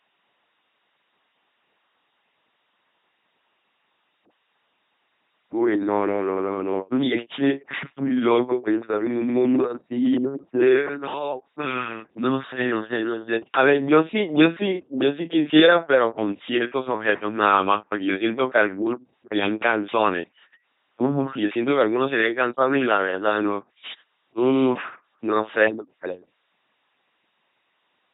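LPC-10 vocoder damage runs through the whole of this speech clip, from start to finish. Each stretch of the voice is rebuilt from a short all-pole filter excited either by a buzzy pulse train or by noise, never a mix, so the speech comes out mechanical and robotic, with buzz or hiss wherever voicing is misjudged. The heavy degradation fits a 2.4 kbit/s coder, and nothing survives above about 3.8 kHz.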